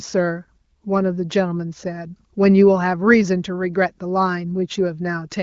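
No technical faults are audible.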